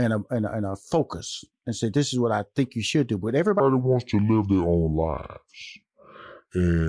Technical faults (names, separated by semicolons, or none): wrong sample rate